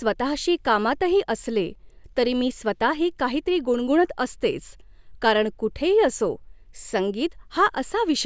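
Nothing technically wrong turns up in this bit of speech, so there's no fault, time or cause to point to anywhere in it.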